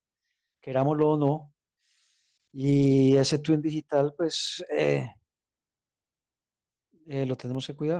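From 2.69 to 2.91 s, six separate lost packets were rebuilt from error correction: the decoder filled about 120 ms with the low-bitrate backup copies carried in the following packets. There is no gap, but that stretch sounds rougher and noisier than the surrounding Opus-coded speech.

From 4.47 to 7.55 s come periodic USB or driver dropouts, spaced 1.024 s apart. Each time, something blocks the audio path and roughly 2 ms of signal is replaced by silence, giving about four short, regular ticks heard against the speech.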